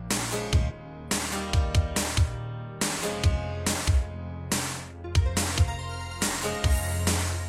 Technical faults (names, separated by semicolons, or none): damaged data in a compressed stream